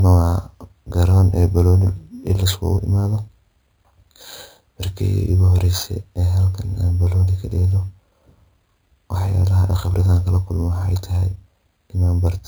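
Speech running the full length carries imaging from sample-and-hold upsampling. The audio was raised from about 11 kHz to 44.1 kHz by repeating each sample without smoothing. Mirrored copies of the speech spectrum sit around 11 kHz and its multiples, starting at 5.5 kHz, about 26 dB below the signal. The result is a metallic fizz that tracks the speech level. Unlike aliasing, this fizz sits above the band limit, and its lowest copy falls as the voice pitch rises.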